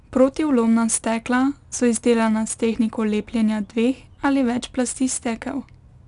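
From start to finish the speech carries 4-bit ADPCM compression, and the damage is plainly audible. Each sample is stored as a coarse step from a prediction. That leaves a gritty hiss that rides on every loud passage. Nothing reaches above 10.6 kHz, which fits a stream near 89 kbps.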